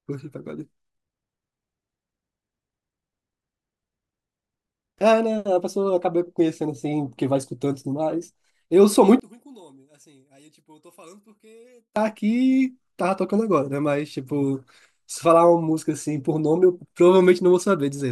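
One channel inverted, from 9.20 to 11.96 s: the speech drops by about 31 dB and nearly disappears, leaving only a faint trace for almost three seconds before returning at full level. The likely cause is one stereo channel with reversed polarity. When the two channels are summed to mono, the centred voice, common to both, cancels itself out, and only the small difference between the channels survives.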